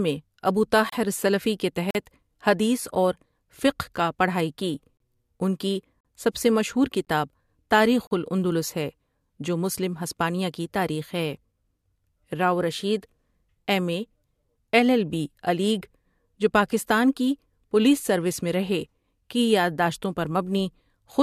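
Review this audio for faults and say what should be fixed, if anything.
Gaps between stream segments silence the speech with hard edges at 0.90, 1.91–1.95 (after "السلفی کے"), 2.95, 4.97–5.00, 6.01–6.05 (after "ان کی"), 7.05–7.07 and 8.07–8.11 s (before "الاندلس ہے جو مسلم"). The gaps recur about once a second, which fits 1-second segments whose timestamps leave holes of 8 to 44 ms that the player fills with silence. Unlike a dropout, no speech is lost: the sound resumes exactly where it stopped, only later. To prevent it, make each segment's start timestamp match the previous segment's end.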